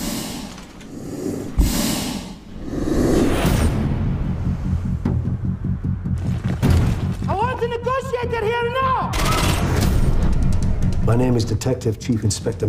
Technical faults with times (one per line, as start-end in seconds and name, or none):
none